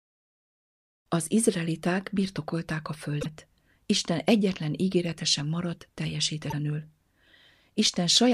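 At 3.20 s and again at 6.47 s the speech is broken by brief bursts from damaged data in a compressed stream, lasting about 56 ms and 68 ms. In each case a stretch of the encoded bitstream is corrupt, so the decoder misreads those frames, loses sync and hunts for the next valid frame header. What comes out is a short, harsh chirp or squawk in place of the intended audio.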